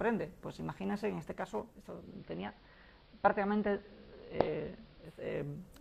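Digital radio blending to analogue occurs from 1.82 s to 5.42 s. The hybrid receiver lost its digital stream and cross-faded, over about 0.41 s, to the station's AM broadcast, then faded back near the end. While on AM, hiss sits roughly 30 dB below the signal, and the sound takes on the narrower bandwidth typical of AM reception. Loudness stays the same on either side of each blend.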